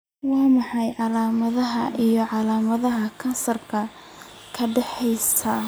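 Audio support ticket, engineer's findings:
Channel delay (comb filtering), 0.00 to 1.00 s: speech hollow and phasey. One channel lags by under half a millisecond before mono sum; shared content cancels at evenly spaced frequencies, first notch around 1.5 kHz. Check channel alignment upstream of summing.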